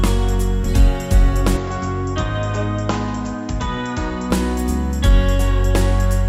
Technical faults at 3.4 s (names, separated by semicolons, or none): input switched to a poorer device